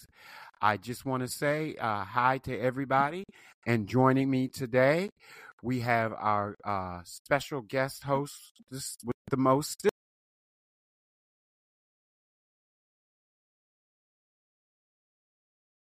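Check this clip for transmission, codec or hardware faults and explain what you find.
One fault: an audio dropout to silence from 9.89 s to the end. The sound cuts off mid-flow and leaves silence with no room tone. The likely cause is lost input, such as a disconnected device or failed link, while the recorder kept writing silence.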